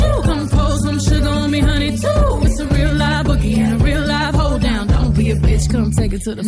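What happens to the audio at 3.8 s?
Nothing goes wrong at 3.8 s; the audio passes through that moment intact, with no dropout, click or other disturbance.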